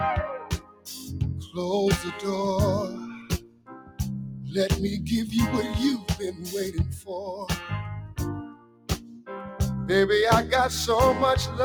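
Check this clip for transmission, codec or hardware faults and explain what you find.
A speech-tuned noise suppressor is processing this sound, and it turns parts of the sound down hard.

The noise suppressor applied to music or sounds runs through the whole clip. It treats steady, sustained material as background noise and pulls it down. Sharp onsets pass, but held parts and tails sink. Gain swings of around 15 dB make the level pump and flutter. Decays thin out instead of ringing naturally.

Sound cut by the noise suppressor shows up in four places: 0.43 to 0.87 s, 3.16 to 4.0 s, 8.04 to 8.19 s, and 8.43 to 9.3 s. Here the suppressor judged the material to be noise and dropped it harder than the rest. The deepest cuts reach about 16 dB. The 8.04 s dip is shallower, about 12 dB. Steady content sags in level or has its decay cut short.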